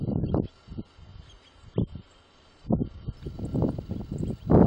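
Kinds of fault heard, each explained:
Adaptive stream starting at a low bitrate: for the first 3.17 s the sound is dull, with nothing above 9.7 kHz and stronger codec artefacts, and then the top end and clarity return abruptly with no break. This fits a player that begins on a cheap low-bitrate rendition, around 24 kbit/s AAC, to start fast, then switches to a richer rendition, near 96 kbit/s, once it has gauged the connection.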